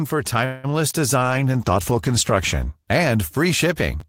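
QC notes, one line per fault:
0.45–0.72 s, call audio freeze: The audio stalls and the last sound is stretched into a buzzy continuation that fades without ever dropping to silence. This is likely a network hold-up that drained the jitter buffer, leaving the receiver to invent about 184 ms of filler. When the audio resumes it picks up exactly where it stopped, so nothing is lost. Everything after this point simply plays about 0.18 s later than it should.
0.89–0.93 s, short concealed packet loss: A brief smear or wobble is heard where about 20 ms of audio never reached the decoder in time. The receiver covered the hole by carrying the preceding sound forward for roughly 16 ms and then blending back into the real signal. Because the gap is so short, it reads as a brief waver rather than a dropout, but whatever sat in that instant is gone.
1.21–2.79 s, call bitrate drop: For about a second and a half the sound turns rough and watery, with the top end dulled. 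The encoder's rate fell from 32 kbps to 13 kbps, most likely because the call's bandwidth estimate collapsed. At that rate Opus has to quantise much more coarsely and trims the high frequencies, producing the muffled, gritty texture. Clarity returns once the rate climbs back up.
4.00 s, chunks out of order: A tiny jumble is heard right near the end. A slice of roughly 5.8 ms arrived one chunk late and was played after the chunk that should have followed it. No audio is missing, but the swap creates three abrupt joins in quick succession.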